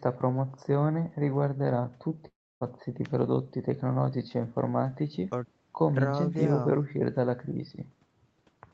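This speech clip has one long network dropout, from 2.27 s to 2.63 s. The last sound carries on as a fading buzz, then sinks into near silence for about 270 ms. The speech then resumes further on. About 340 ms of it is simply gone. The likely cause is packets that stopped arriving, with the receiver filling the gap and then giving up. The audio is band-limited to 8 kHz, which fits an Opus call at about 20 kbps.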